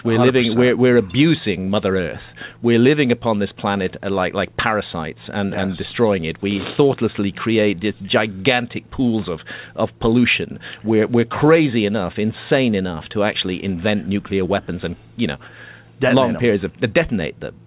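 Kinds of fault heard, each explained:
No kinds of fault are heard; the audio simply carries the narrow band of a G.711 call path, with nothing above 4 kHz.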